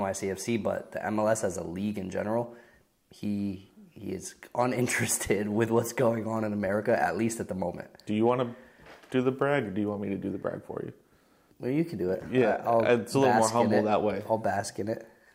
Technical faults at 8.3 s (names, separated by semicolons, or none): hard clipping